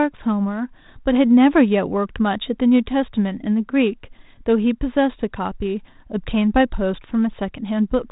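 No technical faults can be heard anywhere in this speech. The G.726 ADPCM path at 32 kbit/s leaves only light coding damage, with nothing passing above 4 kHz.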